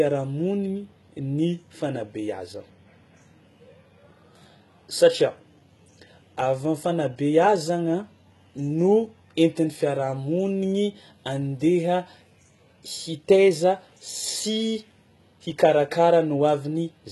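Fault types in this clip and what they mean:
HE-AAC compression: throughout, nothing above 11.8 kHz and heavily gritty, metallic sibilants, likely HE-AAC faking treble from copied lower bands, fitting about 16 kbps.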